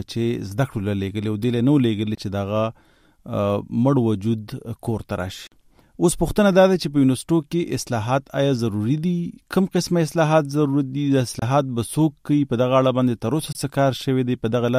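Four short holes break up this audio, and they sound like a Bluetooth dropout: at 2.15 s, 5.47 s, 11.39 s and 13.52 s the output cuts to silence, then resumes further along as if it had kept playing underneath. Three gaps last about 23 ms and the one at 5.47 s about 46 ms, which fits one and two lost packets respectively. The likely cause is packets reaching the headphones too late and being discarded.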